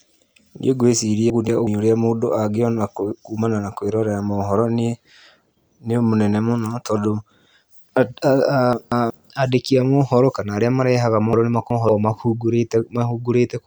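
Speech that jumbles briefly at 1.30 to 1.67 s (before "ũrĩa mũndũ angĩona kumana"), 8.73 to 9.10 s (before "andĩki a mohoro kana") and 11.33 to 11.89 s (after "mohoro kana arĩa marehaga"): chunks out of order, with 186 ms blocks playing one or two places late.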